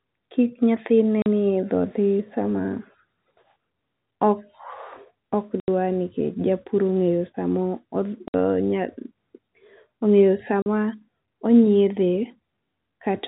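Clipped silent holes with hard edges cut the speech at 1.22 s (40 ms), 5.6 s (80 ms), 8.28 s (60 ms) and 10.62 s (40 ms). This is packet loss filled with silence, each gap a multiple of 20 ms, which fits 20 ms packets dropped over the telephone-band G.711 link.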